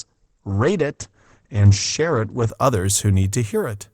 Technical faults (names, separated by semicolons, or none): adaptive stream starting at a low bitrate